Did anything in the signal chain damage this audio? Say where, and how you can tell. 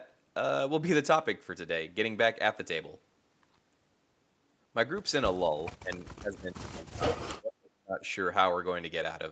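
Yes. Speech suppressed in double talk, from 5.76 to 8.02 s, most likely at the call-processing stage. Across about two seconds the talker's level falls away in pieces, at its deepest by something like 35 dB, rather than staying steady. This points to the echo canceller failing to tell the near talker from loudspeaker echo while both sides were active, and pulling down everything it could not separate. The 8 kHz band limit comes from the Opus call path.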